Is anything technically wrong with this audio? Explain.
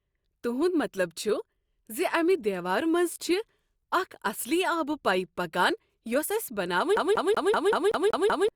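Yes. From 6.97 to 8.49 s the speech gets CD stuck on one turn: a scratch throws the laser back, so a 190 ms slice repeats eight times with tiny mutes.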